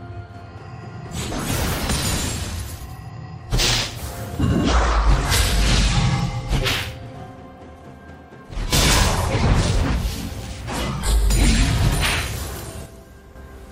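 At 8.54 s the level drops abruptly by about 8 dB until 8.73 s, and again by about 6 dB from 12.86 to 13.36 s, with the background falling together with the sound. These sudden gain jumps likely come from gain applied without any ramp.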